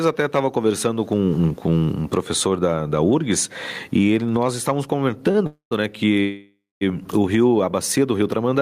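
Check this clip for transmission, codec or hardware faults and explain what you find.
Three faults are audible: gain pumping throughout, a short stall at 5.31 s, and two call audio freezes.

Gain pumping runs through the whole clip, with gain swings of around 20 dB. The likely cause is gain set far too high, with a fast limiter pulling it down on every peak. Dynamics sound squashed.

A short stall from a late packet occurs at 5.31 to 5.36 s, right after "e ele nós estávamos". A packet arrived late and the jitter buffer ran dry. The receiver stretched the last sound by about 31 ms, then resumed. Nothing is lost. The sound is just held briefly.

Call audio freezes occur at 5.46 to 5.73 s, again after "e ele nós estávamos", and at 6.20 to 6.83 s. The likely cause is delayed packets emptying the jitter buffer. Each time, the last sound trails off into silence, about 120 ms and 220 ms of it. 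Playback then picks up where it stopped, so gaps are inserted but nothing is skipped.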